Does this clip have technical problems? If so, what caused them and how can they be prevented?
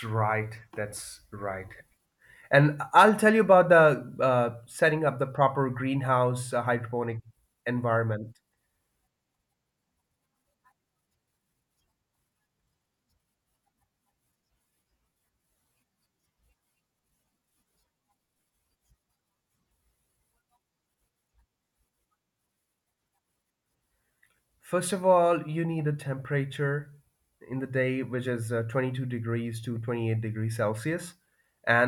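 No, this clip has no technical problems, so there is nothing to trace to a cause or to prevent.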